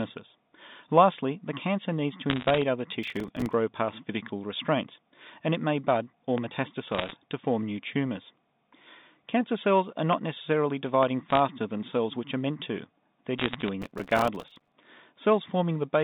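A speech recording over a G.711 telephone line, band-limited to roughly 150 Hz to 3.7 kHz, with three kinds of fault. Bit errors on the digital phone line appear as scattered sharp ticks from 2.30 to 2.62 s, 6.92 to 7.12 s, 11.30 to 11.39 s and 13.38 to 13.69 s. Each flipped bit corrupts a single mu-law sample, and the density suggests an error rate of around half a percent. The ticks are isolated and the speech stays continuous beneath them, which separates them from overload crackle. Processor overload crackle is a denser, gritty tearing from 3.03 to 3.53 s and from 13.82 to 14.73 s. Here the audio itself is broken: buffers repeatedly miss their deadline and drop to silence, leaving hard-edged gaps at a rate that fits buffers of about 3 ms. The texture is a rapid chopping of the speech rather than ticks laid over it. Three loud pops occur at 6.38 to 6.40 s, 10.13 to 10.15 s and 11.03 to 11.05 s, each a single thump peaking about 15 dB above the speech. 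Each is likely an electrical transient such as a plug, switch or static discharge. Unlike the other two faults, each pop is one large isolated event, and the speech continues unbroken underneath.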